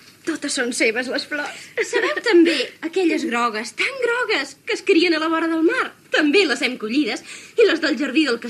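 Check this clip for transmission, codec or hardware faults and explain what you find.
Nothing stood out on listening that would point to a problem in how this audio was carried, encoded or captured.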